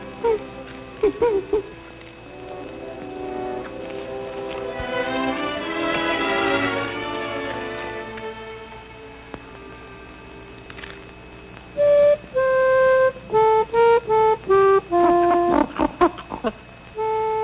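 No faults are audible; the band limit at 4 kHz is simply the narrowband character of the call path, consistent with a telephone-grade codec such as G.711.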